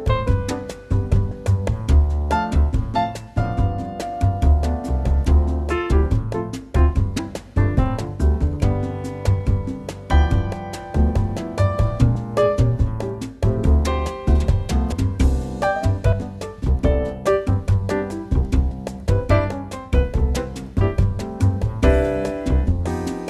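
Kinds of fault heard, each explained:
Compressed frames skipped: whole encoded frames went missing or were rejected by the decoder as damaged, so playback leaps forward. The audio jumps ahead seven times by one to five 26.1 ms frames, about 30 to 150 ms lost.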